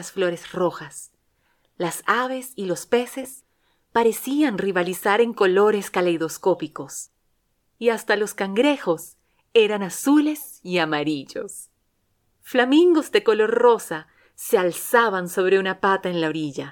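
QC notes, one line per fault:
3.23–3.25 s: lost LE Audio frames. The LC3 decoder filled the 20 ms gap by reusing the last spectrum with random signs, which produces a brief noisy smear.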